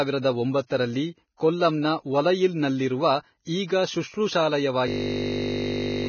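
From the start, the speech is hissy and grainy, and nothing is heard above 6.5 kHz. That points to heavy lossy coding, likely Vorbis at a low bitrate near 17 kbps. Coarse treble quantisation turns fine detail into noise and blurs attacks.

At 4.88 s a system hang loop begins and runs to the end at 6.08 s. A 20 ms piece of audio repeats exactly, 60 times, while the playback buffer keeps cycling. It sounds like a steady 50 Hz buzz. Roughly a second of speech is lost.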